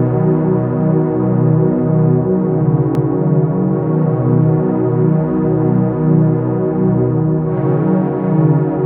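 A short run of compressed frames, which fits a pair of frames, was sent twice, so the decoder repeats 2.95 to 3.14 s once, a 186 ms stutter that lengthens the audio.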